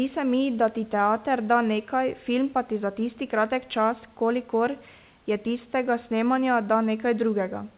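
No technical faults are audible anywhere in this recording.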